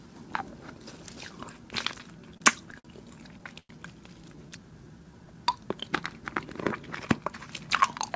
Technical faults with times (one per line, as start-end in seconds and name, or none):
2.02-2.86 repeated stalls (stutter)
3.59-3.71 short stall from a late packet
4.36-5.25 jitter buffer slow-down
7.18-8.10 jitter buffer speed-up